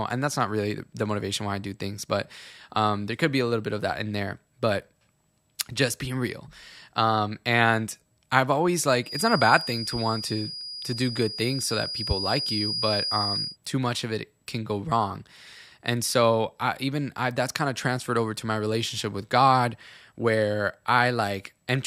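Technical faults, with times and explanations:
9.01–13.58 s, feedback whistle: a thin, steady 4.9 kHz tone sits a few dB under the speech after "um and i've always", likely from a loudspeaker-to-microphone loop held at the edge of feedback.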